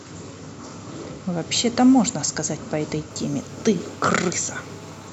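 From 3.11 s to 5.08 s the speech carries a GSM phone buzz: a nearby 2G handset on a call transmits bursts about 217 times a second, which the audio circuitry rectifies into a steady, raspy 217 Hz buzz rich in harmonics, sitting about 25 dB below the speech.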